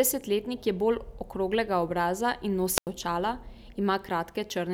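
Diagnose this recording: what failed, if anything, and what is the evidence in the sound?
A wireless microphone squelch dropout hit the analogue radio link ahead of the converter. Around 2.76 s the speech gives way to a brief rise of hiss, then a near-silent hole of about 90 ms before the speech returns at 2.87 s. The FM carrier faded, and the receiver's squelch muted its output.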